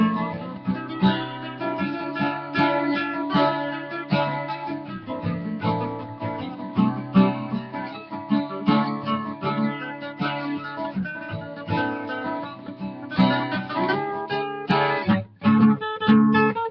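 Throughout the clip, a noise suppressor applied to music or sounds keeps mistaking held, steady material for noise, pushing it down by as much as around 10 dB while onsets pass. The level pumps and tails thin, unlike a compressor, which reacts to loudness rather than steadiness.

The sound is cut by the noise suppressor hardest at 1.45–1.61 s, 4.8–5.08 s, 6.52–6.77 s, 12.56–12.74 s and 12.93–13.11 s, each a dip of about 5 dB lasting a fraction of a second. The sound sinks rather than vanishing, which separates these from dropouts. Above this, the call microphone processing caps the band at 8 kHz.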